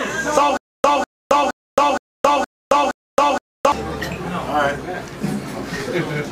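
Stutter with silent gaps runs from 0.57 s to 3.72 s. The same fragment of about 198 ms repeats six times, each followed by about 270 ms of silence, so the burst returns every 468 ms at a steady pace. The likely cause is a stalled player or stream that replayed its last fragment at each retry and then ran out of data. The audio that should have filled that stretch is missing.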